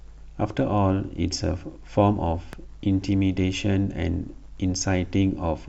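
A loud pop interrupts this speech recording at 2.53 to 2.56 s: a single sharp transient that rises a few decibels above the surrounding sound while the talking continues beneath it. The likely cause is a sudden electrical step or pulse, from a plug, a switch, static discharge or a driver glitch, entering the signal path. The downstream circuitry shapes that jolt into a brief, percussive click-thump lasting only a couple of hundredths of a second.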